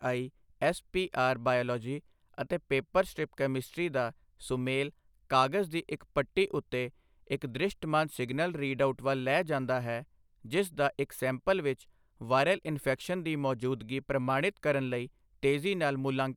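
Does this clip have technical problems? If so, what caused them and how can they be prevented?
No, there are no technical problems to report here.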